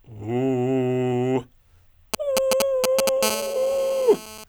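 GSM signalling bursts run from 2.14 to 3.09 s: a nearby 2G phone sends short groups of radio pulses, which the audio circuit rectifies into a galloping dit-dit-dit of brief 217 Hz buzzes, roughly as loud as the music.

GSM phone buzz follows from 3.23 to 4.44 s, as the phone transmits in bursts 217 times a second during a call. Its 217 Hz pulse train, rectified by the circuit, becomes a steady, hard, raspy buzz rich in harmonics, about 9 dB below the music and unrelated to it.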